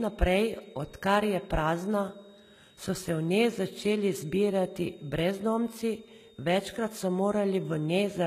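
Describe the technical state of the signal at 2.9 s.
At 2.9 s, a switching power supply in the chain is running in an audible burst mode or beating with another supply, and its switching frequency sits inside the audio band. The result is a switching supply whistle, a thin high tone wandering between 3.6 and 3.8 kHz, roughly 35 dB below the speech. It runs through the whole clip, so at 2.9 s it is simply part of a continuous whine, its pitch drifting as the supply's load shifts.

The treble here was most likely rebuilt by HE-AAC compression at a low rate, consistent with something around 20 kbps. The codec carried only the lower spectrum and regenerated the top by copying lower bands upward under a coarse envelope. The high end therefore sounds synthetic, with harmonics that don't line up across the crossover. The damage is plainly audible on sibilants, which turn gritty and lispy, and nothing remains above 14.9 kHz. 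This too spans the entire clip, including 2.9 s.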